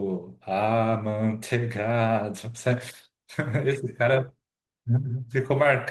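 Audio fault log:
No faults are heard anywhere in this speech clip. There is nothing to log.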